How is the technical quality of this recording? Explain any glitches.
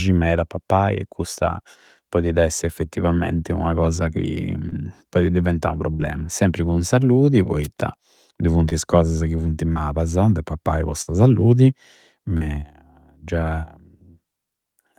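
The speech has several network dropouts and one radio noise hit.

Short concealed packet loss occurs at 4.69, 8.69 (just before "is cosasa ca funti"), 9.73 and 12.37 s. About 20 ms went missing each time, 40 ms at 12.37 s. The receiver extended the preceding sound to bridge each hole. Each is a brief smear or wobble.

Bursts of packet loss occur at 5.91 s and at 11.02 s, right after "de pappai po". About 80 ms and 60 ms were lost. The decoder held the last sound and faded it, giving a short buzz or hiss. Speech then jumps ahead, skipping the lost part.

A wireless microphone noise hit occurs at 7.63 s, just after "cun salludi". It lasts about 50 ms. The FM radio signal faded as reflections cancelled, letting receiver noise rise. It sounds like a quick swish of static.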